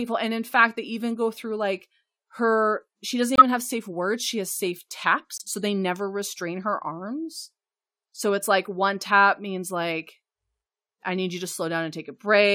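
At 3.36 s, after "like her she doesn't", and at 5.38 s, after "has safe", corrupt frame muted faults cut the speech to silence for 60 ms and 44 ms. The decoder rejected damaged compressed frames and the player substituted silence. The holes start abruptly, and timing stays intact.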